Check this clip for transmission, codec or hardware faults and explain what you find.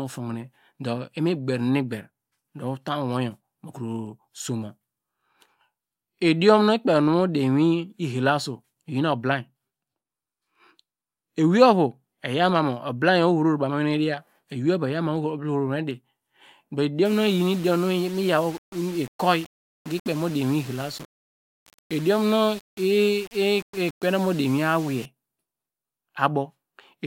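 One fault: low bit depth without dither, from 17.05 to 25.05 s. The speech was likely requantised to what sounds like about 6 bits by plain rounding, with no dither, so the error tracks the signal. It sits only about 20 dB below the speech, making it grainy and gritty, with the roughness shifting as the speech moves and quiet stretches breaking up.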